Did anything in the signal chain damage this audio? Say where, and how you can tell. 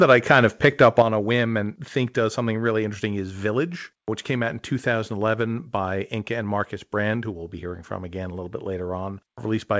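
Yes. From 0.01 to 1.02 s the loudest syllables carry a harsh, crackling edge. This is microphone overload, likely at the converter input, with peaks driven about 3 dB past full scale and a small fraction of samples flattened. Codec noise sits evenly under everything, whereas this distortion rides only the peaks.

At 1.02 s, just before "a whim and think", voice and background drop together by about 7 dB in one step. This is the microphone volume stepped down, likely a call-processing gain cut following the clipping. Because it is a single instant drop rather than a gradual slide, it is not automatic gain control riding the level.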